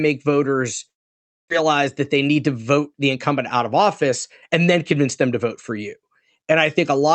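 From 0.89 to 1.52 s the speech stalls: the last sound smears into a fading buzz, drops to silence, and comes back with about 400 ms gone, likely a long network dropout. Then from 1.62 to 4.49 s, just before "and then convince them", there's a jitter buffer speed-up. The receiver trims tiny pitch-period chunks, roughly 200 ms in total, so the talk runs about 6% faster at the same pitch and feels a bit rushed. All of this rides on the Opus call path, whose 8 kHz bandwidth takes the top off throughout.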